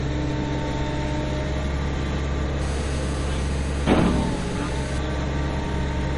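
A recording of sounds, likely passed through heavy MP3 compression at a low bitrate, around 40 kbps, leaves nothing above 10.5 kHz and a plainly audible watery, swirling smear throughout. From 2.62 to 4.98 s, a nearby 2G phone on a call produces GSM phone buzz, a steady, raspy 217 Hz buzz rich in harmonics, about 17 dB below the sound.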